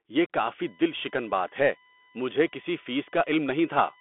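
Bluetooth CVSD headset codec damage runs through the whole speech clip. The band is confined to roughly 250 Hz to 3.5 kHz, with nothing at all above 3.8 kHz. That points to a 64 kbps CVSD link, where each sample is a single up-or-down bit and the step size has to adapt. Fast, loud high-frequency content outruns that step, so sibilants come out scratchy and a grainy hiss sits beneath the speech. The damage is plainly audible.

USB whine enters at 0.63 s and continues to the end. It is a steady tone built on a 1 kHz fundamental, the rate of the USB bus's 1 ms frames, with its strongest component at the 9 kHz harmonic. The periodic current draw of those frames is leaking into the audio through the power or ground path. The whine holds a fixed pitch and sits roughly 30 dB below the speech.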